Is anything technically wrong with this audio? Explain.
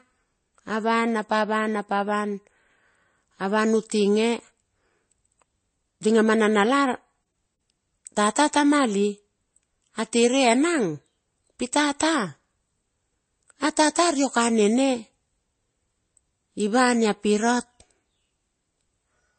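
Yes, there's a problem running through the whole speech clip: it sounds like transcoding between lossy codecs. Nothing comes through above about 8.3 kHz, so it's dull, and there are two flavours of artefact stacked on top of each other. The likely cause is a low-bitrate MP3 re-encoded to Vorbis at a similarly low rate. The second encoder wastes bits on the first one's mess and adds its own, while the lowest cut-off in the chain stays put.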